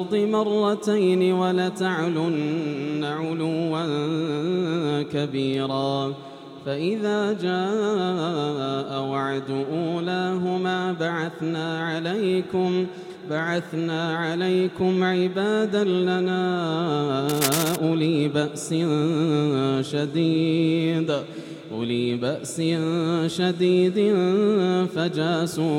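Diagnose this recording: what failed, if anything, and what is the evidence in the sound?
The fault sits in the analogue wiring. From 17.29 to 17.76 s, a burst of cable scratch noise rides over the sound, a dense, ragged rustle only a few decibels below the programme level. The likely cause is a worn cable or connector being moved, its contact resistance fluctuating rapidly. Unlike a digital dropout or buffer click, the noise is irregular and granular rather than a clean gap or a single sharp tick, and the underlying sound keeps running beneath it.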